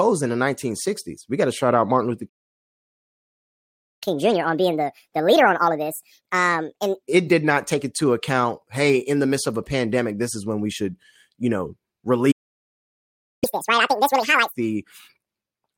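At 2.29 s the player likely ran dry of buffered data, a playback stall, so the speech cuts out mid-flow and silence holds for 1.73 s until 4.03 s. The player then clears its backlog through catch-up at higher speed, resampling at 1.5x from 4.03 to 7.03 s, so the speech sounds hurried and raised by roughly seven semitones before settling back.

A second playback stall, likely from the output thread being blocked, silences the speech from 12.31 s for 1.11 s. Catch-up follows at 2x from 13.44 to 14.55 s, shorter and more extreme, with pitch lifted about ten semitones into a chipmunk-like rush.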